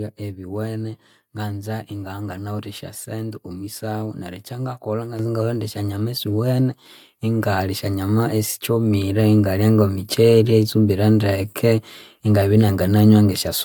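A speech clip with one fault. At 5.19 s the microphone volume stepped up by about 6 dB in a single jump. Voice and background noise rise together. This points to call software raising the device's input gain after judging the microphone too quiet.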